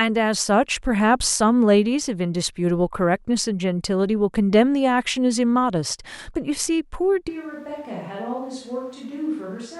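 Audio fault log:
7.30–9.79 s: likely a switch to a distant microphone. Speech abruptly turns roomy, hollow and thin, drops about 10 dB, and carries more room noise to the end.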